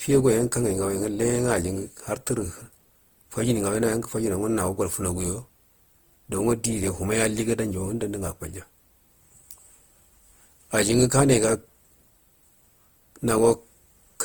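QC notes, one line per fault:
Throughout, generation loss: swirly, hollow, smeared speech with blurred attacks, more than one encode would explain. It's likely been through an Opus-style codec, sounding like 48 kbit/s, roughly seven times, with each pass re-quantising on a shifted frame grid.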